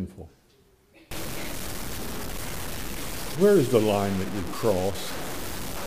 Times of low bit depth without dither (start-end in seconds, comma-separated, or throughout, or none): 1.11-5.87